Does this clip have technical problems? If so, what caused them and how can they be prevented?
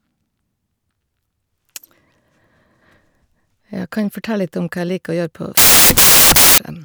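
Yes. From 5.57 to 6.58 s the speech is replaced by loud hiss: samples built from the wrong bytes. The reader assembled each sample with its bytes misordered or misaligned, so the rapidly changing low bits became the dominant part of every value. A waveform shows a solid, dense block of noise for that second, and a spectrogram shows flat broadband energy across all frequencies. Prevention: declare and verify byte order, sample width and frame alignment when reading the stream.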